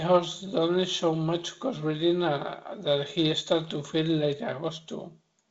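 No technical faults are audible anywhere in this speech.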